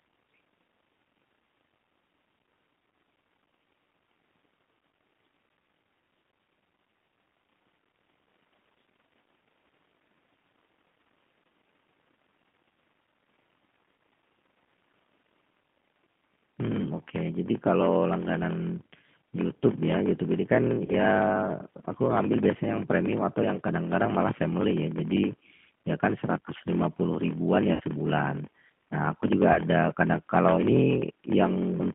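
Throughout the speech, a block size mismatch (padded) means one stage hands over shorter blocks than the next reads, and the remainder is zero-filled. The buzz at 43.1 Hz fits 1024-sample reads fed roughly 960-sample writes, and the speech runs at 0.938 speed with its timbre intact.

The line also passes through a G.729 codec. The narrow 150 Hz to 3.4 kHz band and the rough, synthetic texture point to G.729A at 8 kbit/s. Its frame-by-frame rebuild of the voice from a filter, pitch predictor and sparse pulses leaves plainly audible damage.

At 20.86 s, 27.74 s and 29.53 s, VoIP packet loss concealed by the speech codec occurs. The decoder fills the missing audio, about 30 ms, 60 ms and 30 ms respectively, by extending its last pitch and filter at falling gain. Each gap becomes a brief, fading sound, with weakened speech lingering afterwards.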